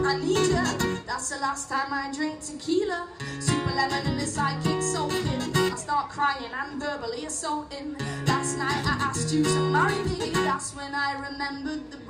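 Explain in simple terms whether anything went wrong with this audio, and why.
Nothing went wrong with this audio, because no fault can be heard anywhere in it.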